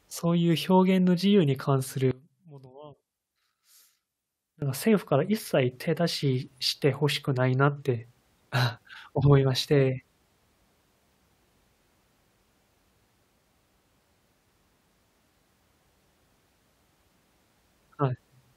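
From 2.11 s to 4.62 s the speech collapses to a faint remnant, about 23 dB quieter than the surrounding audio. This is likely one channel inverted: with one side's polarity flipped, everything common to both channels cancels when summed to mono, leaving only their small difference. The waveform shows a sudden narrow band between full-height sections, and the spectrogram dims sharply across that span.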